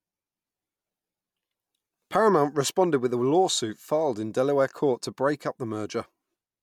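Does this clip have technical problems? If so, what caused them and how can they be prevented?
No, nothing in this speech recording needs fixing, so no cause or prevention applies.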